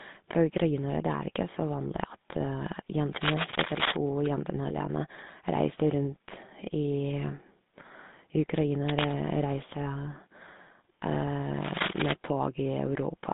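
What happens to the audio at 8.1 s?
At 8.1 s, as throughout, the GSM full-rate codec's pulse-driven vocal-tract model gives buzzy, gravelly speech within about 150 Hz to 3.7 kHz, unlike a cleanly band-limited phone line.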